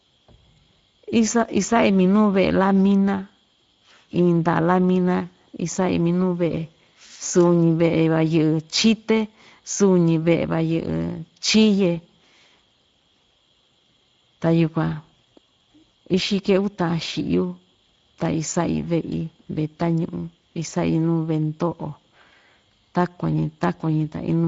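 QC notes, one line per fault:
Throughout: Speex codec. The speech is hoarse and noisy, because this CELP coder has too few bits to model the excitation. The damage is plainly audible, consistent with a Speex bitrate near 17 kbps, unlike the watery swirl of transform codecs.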